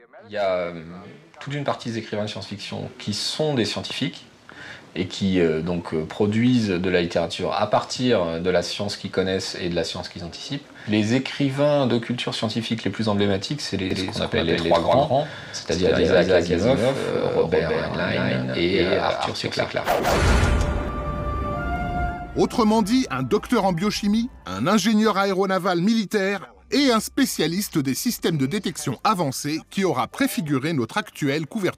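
From 13.9 s to 20.9 s, every sound is followed by an exact full-band repeat about 150 ms later, roughly as loud as the original, with no decay or room colour, starting and stopping abruptly. This is a doubled audio track, likely from a slower second capture path or an edit holding two offset copies.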